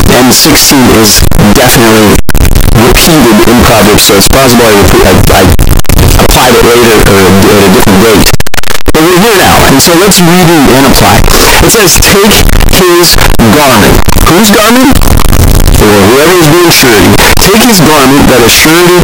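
Speech runs through the whole clip under a constant, violent distortion: soft syllables sit at the same harsh, loud level as the loudest parts. That points to signed and unsigned mixed up, likely 16-bit samples read with the wrong sign convention. Flipping the top bit moves silence to the edge of the range, and each zero crossing turns into a full-range jump, producing a loud, harsh roar over everything.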